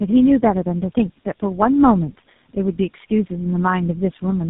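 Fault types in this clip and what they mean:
Tandem speech coding: the speech sounds like it passed through three low-rate speech codecs in a row, each re-coding the last one's damage, so it's rough, muffled and warbly, with nothing above 3.8 kHz, and the final stage sounds like GSM full rate.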